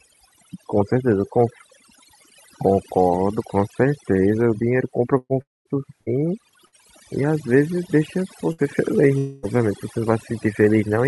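A speech recording with overdone noise removal throughout: the suppressor cuts individual frequency bands whenever they approach its noise estimate, leaving a lowered background with twinkling specks, and quieter speech components are pulled down with the noise. A burst of packet loss occurs at 5.17–5.33 s, where about 120 ms of audio is missing and concealment extends the last sound before roughly 40 ms of silence. Shorter bursts at 6.01–6.09 s, 6.66–6.75 s and 8.52–8.61 s each drop about 60 ms, which the receiver covers with a brief held buzz or fading hiss before the speech resumes further on. Two longer gaps, likely a long network dropout, fall at 5.42–5.68 s and 9.18–9.46 s, each losing about 240 ms. In the first, the concealed sound decays into about 200 ms of silence. In the second, the fill runs the whole gap without going silent.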